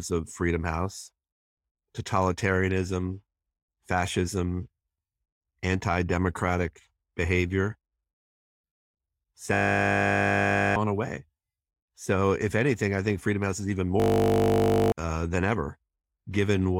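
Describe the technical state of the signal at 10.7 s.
At 10.7 s the signal is stuck in a system hang loop running from 9.54 to 10.76 s. The playback side froze while the hardware kept replaying one 20 ms slice of its buffer, roughly sixty times, so it sounds like a steady 50 Hz buzz and about a second of speech is lost. The waveform shows one identical 20 ms cycle tiled repeatedly; the spectrogram shows flat horizontal lines at multiples of 50 Hz.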